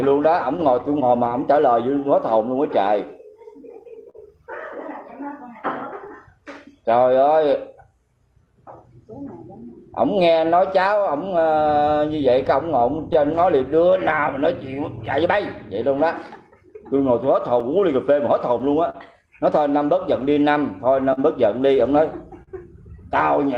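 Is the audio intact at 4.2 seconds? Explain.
No. A short stall from a late packet runs from 4.10 to 4.17 s, ending just before 4.2 s. A packet failed to arrive on time and the jitter buffer ran dry, so the receiver held the preceding sound for 43 ms until the packet turned up, then resumed from exactly where it stopped. Nothing is lost, but that moment lingers unnaturally, with a faint buzzy or dipped quality to the stretched sound.

That moment also falls within repeated timing corrections spanning 0.09 to 20.96 s. The receiver keeps inserting small stretches so playback runs at 98% speed, adding about 0.4 s in total across that span. The edits all push the same way but land at irregular intervals, so any that are noticed come through as slight hiccups and a faintly uneven pace rather than one obvious glitch.

Underlying both is clock drift between sender and receiver, present throughout. 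The sender's clock runs roughly 3 per cent slow relative to the receiver's, so the jitter buffer steadily drains. The receiver compensates by padding the audio.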